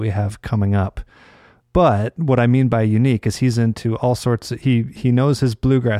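Nothing in the speech stood out as a technical problem on listening.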